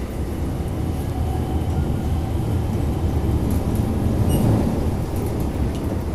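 A likely low-rate MP2 encoding, consistent with something around 80 kbps, has starved this everyday-sound recording of bits throughout. Upper sub-bands drop out and flicker, leaving a dull top end, while the remaining bands are coarsely quantised into a plainly audible gurgling, granular texture.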